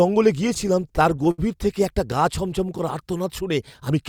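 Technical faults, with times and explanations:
0.47 to 1.40 s, repeated stalls (stutter): The sound halts 13 times. Late packets kept emptying the jitter buffer. The receiver stretched the last sound over each gap, up to 70 ms, about 187 ms in total. Nothing is lost, but the passage drags and stutters.
2.65 to 3.54 s, jitter buffer slow-down: The buffer was low and needed a reserve. So the receiver repeated single pitch periods and bits of pauses. This added 59 ms. The audio plays at 94% speed, at unchanged pitch, with drawn-out sounds.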